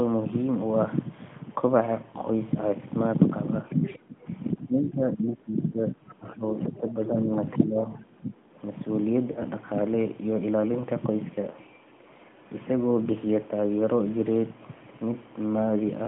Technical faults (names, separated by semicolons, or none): other side's voice leaking through; speech suppressed in double talk; lost AMR speech frames